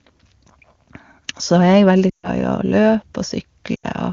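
Lost AMR speech frames at 2.10 s for about 140 ms and at 3.75 s for about 80 ms: the decoder repeats the last good speech settings at falling gain, so the sound quickly drops to near silence before the clear wideband speech returns.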